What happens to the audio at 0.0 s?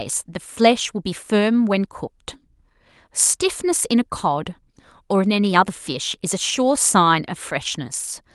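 At 0.0 s the speech is intact, with no dropout, click or other disturbance at that moment.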